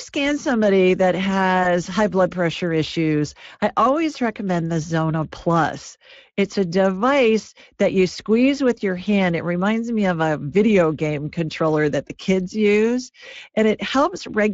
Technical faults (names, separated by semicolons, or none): VoIP packet loss concealed by the speech codec